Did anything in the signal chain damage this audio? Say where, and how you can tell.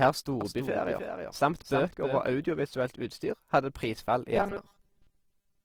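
Yes. Three kinds of damage are audible.

The codec stage shows Opus compression throughout. The speech sounds grainy and rough. Its tonal parts turn noisy rather than clean. Full bandwidth survives, so the top end is not cut off. But the fine detail in each band has been filled with approximations. That is how Opus in its music (CELT) mode behaves when short of bits. The coarseness points to a low rate, around 24 kbps. This is likely an encode at that setting.

A doubled audio track runs from 0.41 to 2.21 s. A second full-band copy of the speech trails the first by about 300 ms, at about 5 dB quieter. It has no reverb tail or room colour, so it is not an echo from a space. It starts and stops abruptly. That likely comes from the same signal reaching the mix twice, through a slower second capture path or an edit that left two offset copies.

From 4.36 s to the end of the clip there is robotic sound from repeated short buffers. 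The speech becomes a stiff, metallic buzz at a fixed 200 Hz. It still follows the rough shape of the talking. A 200 Hz buzz means a 5 ms chunk is being looped. Most of the real audio in this stretch is skipped and replaced by repeats. This is likely a driver or buffer stage starved of fresh data.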